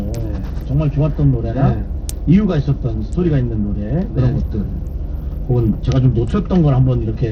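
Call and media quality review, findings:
Whole clip: gritty, plainly audible coding noise with flickering treble; nothing above 17.5 kHz. Likely Bluetooth SBC compression at a small bit pool, consistent with roughly 80 kbps. Grainy and aliased, not the warbling swirl of perceptual-model codecs.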